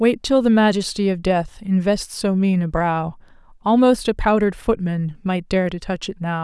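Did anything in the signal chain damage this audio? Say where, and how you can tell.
No, nothing in the signal chain audibly damaged this recording. No stage, from the wiring through to playback, leaves a mark that can be heard anywhere in the speech.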